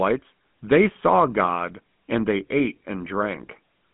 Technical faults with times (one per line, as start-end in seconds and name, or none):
0.00-3.93 GSM full-rate codec